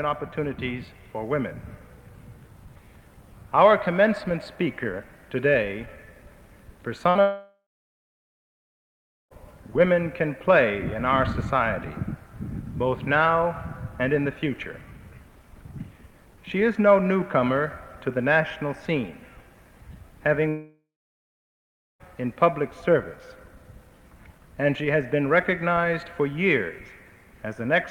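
At 7.09 to 7.17 s a burst of packet loss removes about 60 ms; the concealment repeats the last sound as a fading tail, which on a spectrogram shows as smeared, repeated bands.

From 7.21 to 9.33 s, and again from 20.49 to 22.02 s, the sound decays briefly and then stops for about 1.7 s and 1.2 s. The waveform goes flat there, and the spectrogram shows empty columns. A long network dropout is the likely cause.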